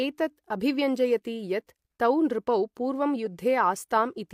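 No technical faults are audible anywhere in the recording.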